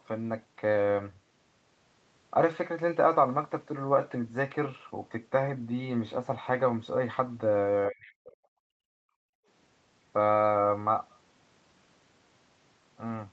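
Speech carried over a call path whose content stops at 8 kHz, with two stretches of speech suppressed in double talk at 7.89–8.34 s and 8.6–9.12 s. The voice itself sinks by roughly 40 dB, likely because the echo canceller confused it with loudspeaker echo while both sides spoke. Separately, at 9.4–9.47 s the background is gated by the echo canceller: the room tone drops, by about 37 dB for 70 ms, while the loudspeaker plays.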